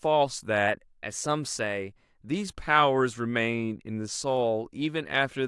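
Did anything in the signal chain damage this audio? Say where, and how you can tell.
Yes: likely a drift correction step in the buffer stage, playing speech 6.4% fast from 0.68 to 2.26 s, raising pitch 107 cents before snapping back.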